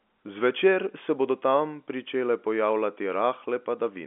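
No faults are audible anywhere in this speech.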